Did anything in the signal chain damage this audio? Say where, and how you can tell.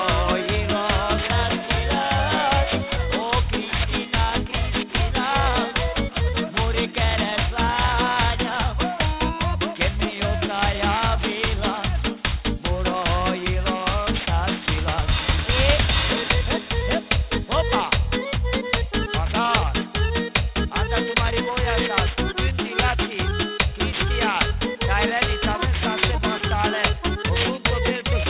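Yes. Through the whole clip the top end sounds gritty and metallic, with harsh, unrelated tones that don't follow the pitch of the sound and energy packed right up against a hard ceiling at 4 kHz. That is aliasing from the sample-rate conversion stage. The fold point fits a drop from 44.1 kHz to 8 kHz with no anti-alias filter, so everything above 4 kHz was mirrored back down, loud, only a little below the wanted signal.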